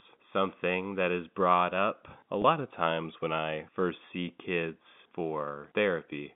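At 2.42 to 2.44 s, just before "of times when I", there is a brief packet loss with pitch repetition. About 20 ms of audio, which fits a single lost packet, went missing, and the receiver filled the hole by repeating the last pitch cycle. The result is a faint held buzz rather than a click. On a spectrogram the harmonics freeze into flat horizontal lines for that instant. A waveform shows identical repeating periods, slightly tapered, before the speech resumes. The narrow telephone band of the G.711 line, roughly 150 Hz to 3.6 kHz, frames the whole passage.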